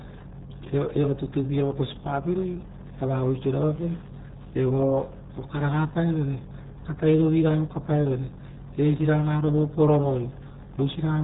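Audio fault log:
Throughout, RealAudio 14.4 codec: the speech sounds heavily muffled and gargly the whole way, with nothing getting through above about 3.8 kHz, so the consonants lose their edge and everything feels boxed in. That narrow band and the thick, bubbly smearing fit an 8 kbit/s dial-up-era speech codec, which throws away most of the detail and rebuilds the sound from a rough model of the voice, leaving that warbly, underwater texture on every syllable.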